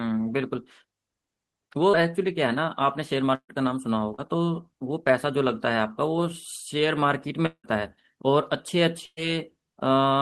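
A burst of packet loss at 3.35 to 3.51 s removes about 140 ms of speech. The receiver extends the last sound into a fading buzz or hiss, and part of it falls silent for roughly 70 ms before the speech resumes further on.

Short concealed packet loss at 4.15 to 4.20 s drops 40 ms. The decoder bridges the hole by continuing the preceding sound and blending back in, so this moment comes across as a brief smear or wobble rather than a clean gap.

At 7.46 to 7.66 s, about 180 ms of audio is lost and replaced by a decaying fill that settles into roughly 70 ms of silence before the speech returns with that stretch missing. A long network dropout is the likely cause.

A second burst of packet loss at 9.06 to 9.26 s removes about 120 ms. The concealment stretches the last sound into a fading tail with around 50 ms of silence, and the recovered speech arrives about 12 ms late.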